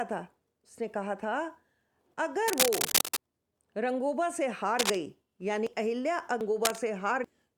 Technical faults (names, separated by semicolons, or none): cable scratch noise; dropped buffer (overrun)